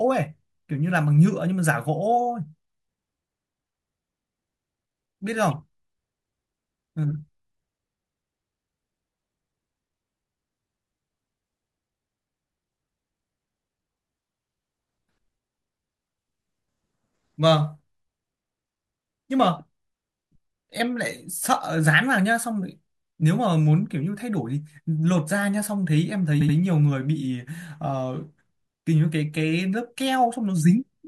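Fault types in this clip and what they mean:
Repeated frames: At 26.40 s the speech stutters, with the same short slice of about 78 ms playing three times in a row, a quick mechanical jolt lasting until 26.56 s. A run of compressed frames, which fits a block of three, was written or delivered more than once, so the decoder rendered identical audio again. The two extra plays stretch the clip by about 157 ms, and every later moment arrives correspondingly late.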